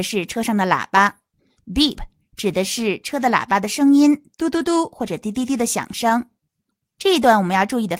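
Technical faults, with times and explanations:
1.83–1.89 s, 4.57–4.63 s, 6.09–6.11 s: lost packet rebuilt from error correction. Short patches of about 40, 40 and 20 ms sound grainier and noisier, with no gap. Each lost packet was filled from a low-bitrate copy carried in the next packet, so the audio continues at reduced quality.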